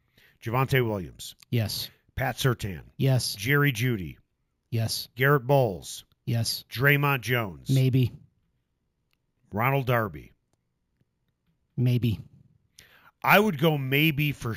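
Imaging from sample-and-hold upsampling runs through the whole speech clip. Each sample appears repeated without smoothing, which fits a 16 kHz source raised to 48 kHz. The mirrored spectrum fills 8 to 16 kHz at about 18 dB below the signal, giving a metallic fizz that tracks loudness and moves against pitch.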